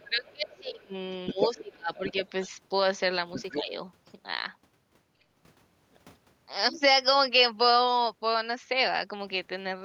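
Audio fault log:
0.04–0.94 s, speech suppressed in double talk: The talker's speech dips in pieces, by roughly 25 dB at its deepest. The echo canceller likely turned both sides down at once.
1.26–1.73 s, other side's voice leaking through: A second voice is clearly audible, only about 5 dB below the talker. This is likely loudspeaker echo the canceller failed to remove.
1.33–2.14 s, speech suppressed in double talk: The talker drops away again, by roughly 25 dB, in short broken stretches. It likely comes from the same confusion between talker and echo.
1.95–2.13 s, other side's voice leaking through: A faint scrap of the other voice sits about 20 dB under the talker. It is likely leftover echo.
3.33–3.63 s, other side's voice leaking through: The second voice returns, about 10 dB below the talker. It is likely a brief escape of residual echo.
3.52–3.74 s, speech suppressed in double talk: A shallower dip of around 10 dB clips the talker briefly. 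The canceller likely ducked its own side while the echo was present.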